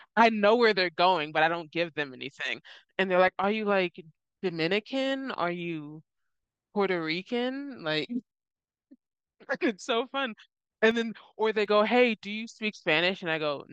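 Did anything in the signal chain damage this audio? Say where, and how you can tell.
Yes. One channel drops out, likely a loose analogue connection: at 3.28–3.44, 8.31–10.71 and 10.91–11.66 s the mono sum steps down about 6 dB, with abrupt, flat-topped dips in the waveform envelope and uniformly dimmer spectrogram bands.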